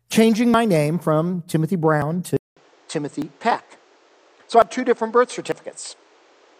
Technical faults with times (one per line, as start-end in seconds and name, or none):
2.37-6.60 input switched to a poorer device